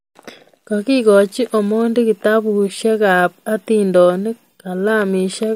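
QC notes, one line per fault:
No faults found on the speech track; nothing to log.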